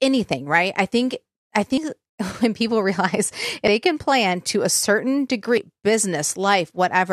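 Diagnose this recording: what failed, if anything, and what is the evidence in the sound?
Audio missing between chunks at the buffer stage: speech jumps at 1.77, 3.67 and 5.57 s, dropping roughly 0.1 s each time, likely at 2-second chunk boundaries.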